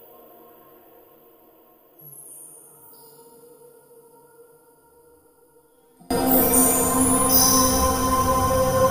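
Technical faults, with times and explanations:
0.0–6.1 s, one channel inverted: The music drops by about 30 dB and turns faint. Centred parts nearly disappear. The likely cause is one stereo channel with reversed polarity, so shared content cancels when the channels combine.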